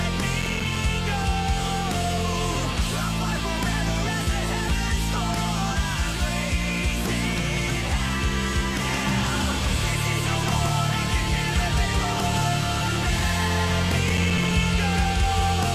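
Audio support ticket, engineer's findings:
Gritty crackle bursts, 0.41–0.76 s and 14.10–14.51 s. Processor overload crackle: CPU missing many consecutive short buffer deadlines, around 3 ms each, each miss dropping a brief silent gap.

Full-band repeat of the audio trailing by about 150 ms, about 5 dB quieter, no decay. Starts abruptly at 8.85 s and runs to the end. Doubled audio track, likely a second, slower capture path mixed in.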